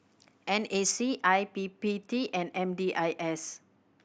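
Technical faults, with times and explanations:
0.91–4.05 s: de-emphasis applied wrongly. A smooth treble roll-off, about 14 dB down at 10 kHz, muffles the speech. Unlike a low-pass filter's abrupt cutoff, the dulling comes on gradually.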